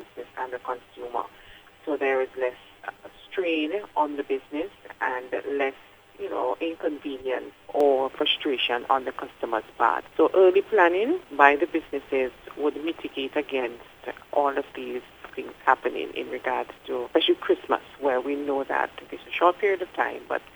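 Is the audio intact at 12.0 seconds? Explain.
Yes, the audio is intact at 12.0 seconds, with no fault at that moment.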